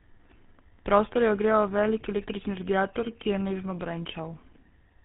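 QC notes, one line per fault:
Throughout: tandem speech coding. The speech went through GSM full rate twice in a row. The second pass worsens the first, leaving it rough, warbly and muffled, with nothing above 3.8 kHz.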